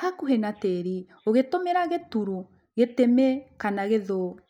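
Listening to the speech recording, nothing technically wrong stood out.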